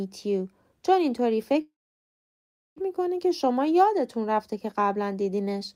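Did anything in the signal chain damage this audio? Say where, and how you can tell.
Yes. A call audio freeze, likely at the network stage, interrupts the speech from 1.61 to 2.78 s. Delayed packets emptied the jitter buffer, so the receiver stretched the last sound into a fading fill, silent for about 1.05 s, then resumed exactly where it stopped. Nothing is lost, but everything afterwards runs 1.15 s late.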